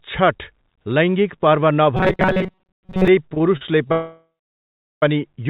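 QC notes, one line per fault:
1.97–3.08 s, robotic sound from repeated short buffers: the speech collapses into a rigid, metallic buzz at 188 Hz that still roughly tracks the syllables. The likely cause is the playback repeating a tiny slice of audio, about 5.3 ms long, over most of this span while fresh audio is skipped. That fits a buffer of roughly that size. The fixed buzz pitch distinguishes it from stutter, where the audio pauses instead of looping.
3.34–3.90 s, repeated stalls (stutter): the speech catches and drags four times. The longest hitch is 37 ms, and the hitches total 91 ms, about 16% of the span. Packets arrived late or too slowly, so the jitter buffer kept running dry and the receiver stretched the last sound each time. Nothing is lost, so the flow simply halts and resumes. Unlike a freeze, each stall is short and they recur rapidly.
3.92–5.03 s, call audio freeze: the audio hangs for 1.1 s. 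The last sound is held and fades out, and about 750 ms of that stretch is silence before the speech resumes exactly where it stopped, with nothing missing. The likely cause is packets held up in transit that emptied the jitter buffer in one long wait, pushing playback about 1.1 s later. This single long gap sets it apart from the brief, repeated stutter before it, and the band-limited call audio, with nothing above 4 kHz, carries on unchanged afterwards.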